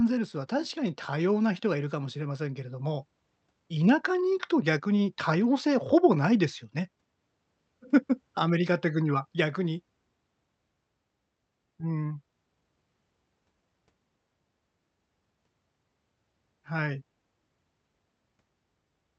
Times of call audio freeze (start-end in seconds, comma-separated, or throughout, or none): none